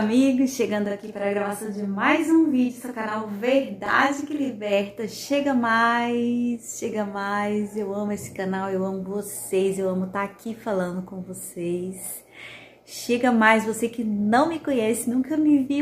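From 0.86 to 4.73 s the audio has channel delay doubling. One channel runs 40 ms late, and the mono sum adds an equal-level slap copy.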